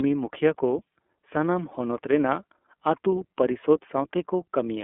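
Speech passed through the iLBC codec for its whole length, cut to a 250 Hz to 3.4 kHz band and coded frame by frame, leaving it plainly rough and synthetic, consistent with iLBC's 30 ms, 13.33 kbps mode.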